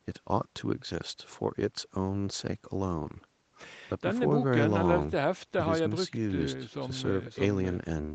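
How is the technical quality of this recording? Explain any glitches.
Nothing stood out on listening to this speech recording, which has the narrower top end typical of a call path, with nothing above 8 kHz.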